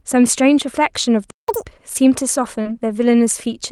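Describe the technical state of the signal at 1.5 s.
At 1.5 s the speech is running at double speed and sounds sharply raised in pitch, nearly an octave up, from 1.48 to 1.66 s. This is catch-up at higher speed: the player resamples its backlog faster to recover lost time, then returns to normal rate.

Just before, from 1.31 to 1.48 s, the speech cuts to silence for about 177 ms and then resumes. That gap is a playback stall, likely the player running short of data or its thread being blocked until output could continue.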